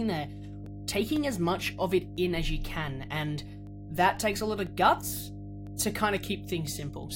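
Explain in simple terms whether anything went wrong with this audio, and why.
Mains hum runs through the whole recording: a steady, fairly loud low buzz at 50 Hz sitting under the speech. It happens when the recording gear picks up electricity from the power supply, often through a ground loop or a nearby transformer, and that mains frequency leaks into the sound.

Periodic USB or driver dropouts occur from 0.16 s to 6.67 s as regular ticks every half second, roughly fifteen in all. Each time, something on the computer briefly blocks the audio connection, and about a millisecond of sound is replaced by silence, leaving a small click.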